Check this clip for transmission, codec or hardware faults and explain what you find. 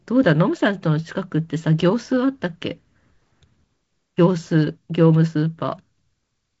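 I find no transmission, codec or hardware faults in this clip.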